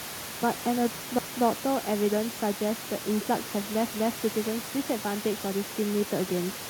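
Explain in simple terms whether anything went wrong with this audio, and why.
Overlapping chunks: around 1.19 s and again at 3.94 s, a quarter-second of the speech plays twice, giving a little stutter. The audio was handled in 2.5-second pieces that each started before the previous one finished.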